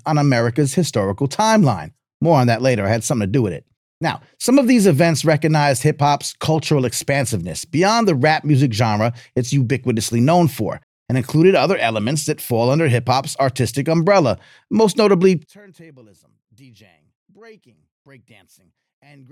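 A speech clip that runs cleanly until just after "artistic umbrella most notably", when at 15.46 s the voice suddenly collapses by about 30 dB and stays there to the end. What's left is a faint residue with the centre gone. That's the signature of one channel inverted: the likely cause is one stereo channel flipped in polarity, so the centred voice cancels itself when the two sides get summed to mono.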